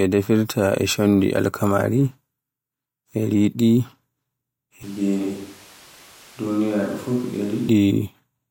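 From 4.83 to 7.68 s, speech abruptly turns hollow, thin and about 5 dB quieter, likely a switch to a distant microphone. Unlike reverb, background noise rises too.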